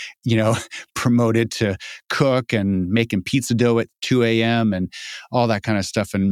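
No technical faults occur at any point in the speech, so there is nothing to describe in time order.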